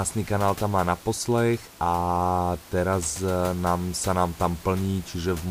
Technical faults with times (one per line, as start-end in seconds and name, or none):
none